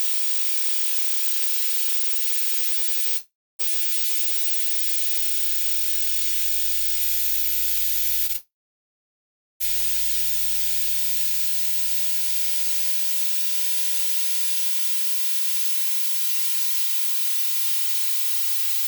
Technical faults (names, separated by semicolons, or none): long network dropout; short concealed packet loss